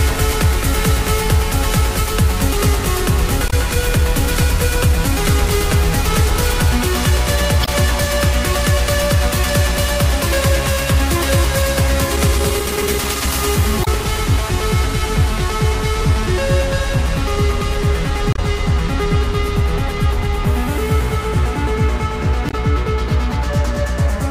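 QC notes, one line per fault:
throughout: doubled audio track. A second full-band copy sits roughly 5 dB under the original and trails it by about a fifth of a second, with no decay or room colour, so it's a hard slapback. Likely a second capture on a slower path, or an edit holding two out-of-step copies.
3.47–3.53 s, 7.62–7.69 s, 13.81–13.88 s, 18.33–18.39 s, 22.48–22.54 s: damaged data in a compressed stream. Each is a brief glitch of around 60 ms where the decoder hits bad bytes, misreads those frames and loses sync until it finds the next frame header.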